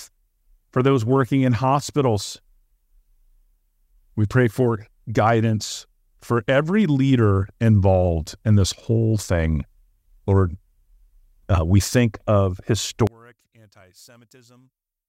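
Speech clip where, from 13.07 s to the end at about 15 s, just after "uh we think of", the centred speech drops by about 31 dB and turns faint. This is likely one channel inverted: the polarity-reversed side cancels the common signal when summed to mono.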